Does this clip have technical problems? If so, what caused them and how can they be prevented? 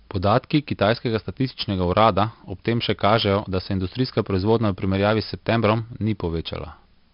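Yes. Throughout the speech, heavy 4-bit ADPCM compression adds a gritty hiss that rises and falls with loudness and roughens sharp onsets, with nothing above 5.3 kHz, which points to roughly 44 kbps. Unlike a steady noise floor, the hiss disappears in pauses. Recording or storing the audio with a higher-resolution codec or as linear PCM would prevent this.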